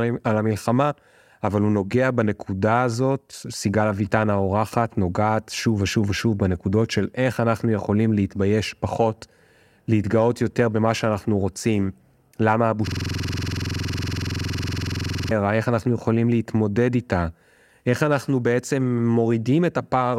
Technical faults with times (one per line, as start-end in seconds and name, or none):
12.87-15.31 system hang loop